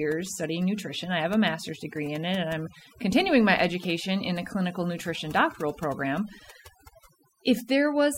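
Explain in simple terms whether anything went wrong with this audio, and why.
Something did go wrong: the whole clip, start to finish, has overdone noise removal. Someone ran a noise-reduction tool far too hard on a noisy recording. It kills any slice of the sound that looks like background hiss, and the quieter bits of the speech get swallowed too. So the background between phrases drops away and breaks up into little sparkly twinkles.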